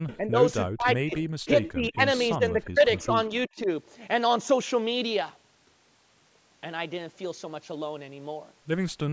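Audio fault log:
0.08–0.17 s, 1.16–1.20 s, 1.63–1.71 s, echo leak: a faint, delayed copy of the voice trails the original by 364 ms. It sits about 25 dB down in the first two spots and rises to about 15 dB down at 1.63 s, where it's easiest to catch. The likely culprit is a far end on speakerphone whose echo canceller left some residue in its mic feed and sent it back to us.
0.17–0.43 s, 0.67–1.14 s, 1.46–2.01 s, 2.37–3.12 s, 3.29–3.68 s, speech suppressed in double talk: the voice keeps ducking in chunks. The worst dip is at 0.67–1.14 s, roughly 40 dB, so it nearly vanishes. The one at 1.46–2.01 s is around 25 dB, the first and fourth are around 15 dB, and the last is a milder 10 dB or so. This is likely both sides talking at once, with the canceller unable to tell our talker from echo and pulling everything down.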